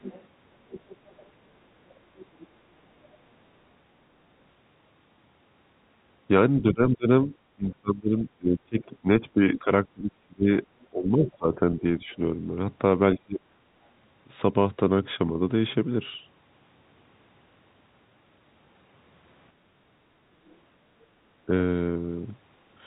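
Speech over a telephone line, so everything above 4 kHz is gone, with the far end bleeding through in places. That's other side's voice leaking through, likely residual echo the canceller didn't fully remove. You can hear the other voice from 0.01 to 1.29 s and 10.83 to 11.31 s at around 20 dB under the talker. It's fainter from 2.17 to 2.47 s and only a whisper from 20.46 to 21.05 s. There's also speech suppressed in double talk, likely the canceller ducking everything when both sides talked at once. Between 6.61 and 12.17 s the talker keeps dipping, for about four seconds in total and as deep as roughly 25 dB. There are shorter bites at 13.13 to 13.42 s and 21.46 to 21.51 s. Finally, there's some background gated by the echo canceller. The room sound sags by about 6 dB from 19.53 to 19.75 s while the loudspeaker plays, then comes straight back.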